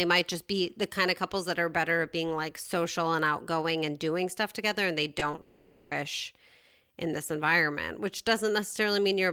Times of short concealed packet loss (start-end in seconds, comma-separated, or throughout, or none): 5.19-5.39